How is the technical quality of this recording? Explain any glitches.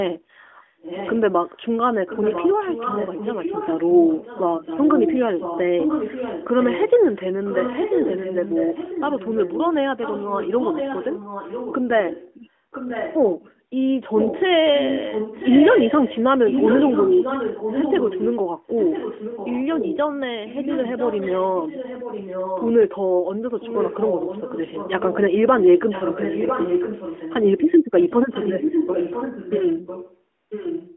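The recording is a narrowband mobile call limited to roughly 200 Hz to 3.4 kHz, with only light codec coloration consistent with AMR-NB at its top 12.2 kbps mode. The main glitch is an echo leak in two stretches, from 14.17 to 22.75 s and from 28.3 s to the end. A distinct copy of the speech returns about one second later, only slightly quieter than the original. The likely cause is a speakerphone whose echo canceller let its own playback back into the line. Reverb would instead smear into a tail, whereas this is a separate, clearly delayed repeat.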